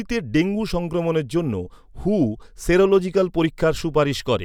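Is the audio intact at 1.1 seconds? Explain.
Yes, the speech at 1.1 seconds is intact, with no dropout, click, distortion or other fault at that moment.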